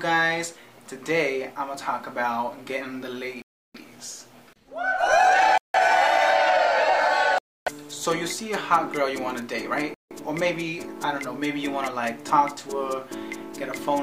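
The audio drops to dead silence four times: from 3.42 to 3.75 s (about 0.33 s), 5.58 to 5.74 s (0.17 s), 7.38 to 7.67 s (0.28 s), and 9.94 to 10.11 s (0.17 s), with sound returning abruptly after each gap. This pattern of hard, brief dropouts is likely a Bluetooth stall: radio interference delays packets, the headphones' buffer empties, and playback halts until the retransmitted audio arrives.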